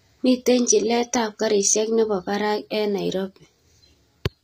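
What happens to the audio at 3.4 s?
At 3.4 s the speech has the same gritty, metallic treble heard throughout, with nothing above 15.4 kHz, likely HE-AAC compression rebuilding the highs from copied lower bands at a low bitrate.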